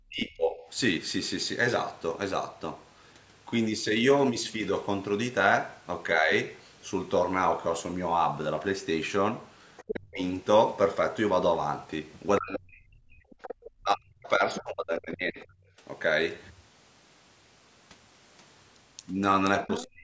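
The speech is sharply turned down from 0.08 to 0.65 s, by about 30 dB at its deepest, and dips slightly, by about 5 dB, at 6.2 to 6.3 s. This is speech suppressed in double talk, likely because the echo canceller mistook the talker for loudspeaker echo.

At 9.77 s a faint second voice, about 10 dB below the speech, briefly comes through. That is the other side's voice leaking through, likely echo the canceller failed to remove. Right after, from 9.89 to 10.2 s, the speech collapses by about 40 dB.

The longest stretch runs from 12.38 to 15.64 s, where the talker is cut down by up to about 40 dB for most of three seconds. Within it, from 13.31 to 15.43 s, the far voice leaks in at about 15 dB below the speech.

The pattern repeats at the end. Leakage appears at 19.68 s, and the speech is suppressed by about 35 dB from 19.8 s until the clip ends.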